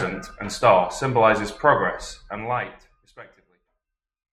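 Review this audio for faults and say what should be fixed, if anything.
Nothing needs fixing: the speech signal shows no technical faults, and the smooth fade-out that begins at around 2 s eases the level down gradually to the end, as an editor would intend.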